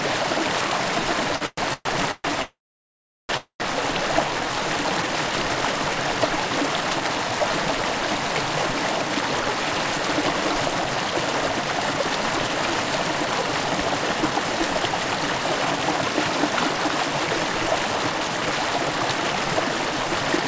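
From 1.36 to 2.26 s there are repeated stalls (stutter): four short gaps, the longest 128 ms, where late packets left the jitter buffer empty and the last sound was stretched. On a spectrogram these appear as smeared, flat-topped bands filling 44% of that span.

A call audio freeze follows at 2.42 to 3.31 s, and another at 3.37 to 3.62 s. Each is a brief fading buzz, then flat silence of about 730 ms and 100 ms, shown as blank columns on the spectrogram, likely from packets held up in transit.

From 4.28 to 5.14 s a jitter buffer slow-down repeats single pitch periods, adding 57 ms. The sound plays at 94% speed with unchanged pitch, and the waveform shows near-identical repeated cycles.

From 10.75 to 19.34 s a jitter buffer speed-up trims short pieces, removing roughly 0.4 s overall. The sound runs at 104% speed with pitch intact, and events sit slightly closer together on the waveform.

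Throughout, the call path's content stops at 8 kHz, an empty band above it on the spectrogram, which fits G.722 at 64 kbps.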